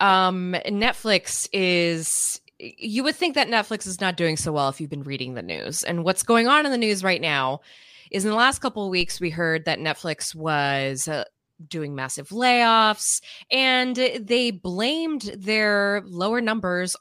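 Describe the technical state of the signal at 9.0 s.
At 9.01 s, between "the last couple of" and "we heard that", the signal has a DC step: the waveform's zero line jumps by about -23 dBFS, then slides back as a 2 Hz high-pass drains the offset. The sudden shift is heard as a single low thump while the speech carries on undisturbed. Unlike a dropout or a digital click, no audio is lost and nothing is a brief spike. The baseline itself moves and recovers slowly.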